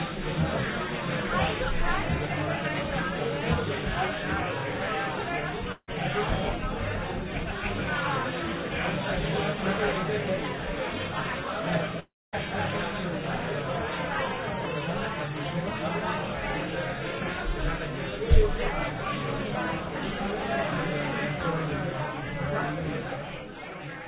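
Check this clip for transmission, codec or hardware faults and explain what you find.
Two kinds of fault are present: two long network dropouts and one chunks-out-of-order event. Both occur over a call path whose spectrum stops at 4 kHz, as a G.711 mu-law codec would produce.

Long network dropout, 5.72 to 5.90 s and 12.00 to 12.35 s: audio was likely lost in transit. A fading buzz fills each gap, followed by silence of about 70 ms and then 250 ms. The waveform shows a decaying tail, then a flat line, and the spectrogram goes blank.

Chunks out of order, 11.47 s: a 5.33 ms chunk plays one slot late, creating three hard joins heard as a brief jumble. The waveform shows abrupt steps, and the spectrogram shows thin vertical lines.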